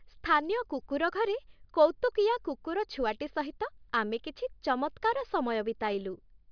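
No technical faults can be heard anywhere in the speech recording. Nothing in the signal chain stands out at any point.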